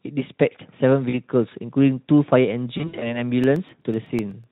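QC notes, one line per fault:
1.09–1.20 s and 2.77–3.22 s, VoIP packet loss concealed by the speech codec: the decoder is papering over missing audio by stretching what it last had. The first patch covers about 40 ms, which fits two 20 ms frames. The second is messier, with around 140 ms gone in bits scattered over 240 ms and the longest hole about 60 ms. You hear that smeared fill, a buzzy tone or a coloured noise, fading out, and the sound stays a bit weak until it settles.
3.44–4.44 s, periodic USB or driver dropouts: about ten tiny gaps, each roughly 1 ms of silence, landing every 0.125 s like clockwork. Something is stalling the bus or driver on a fixed schedule, so small chunks of audio never arrive. Because it's silence punched into a live signal, each one comes across as a little tick, evenly spaced, and they're only noticeable while there's sound going.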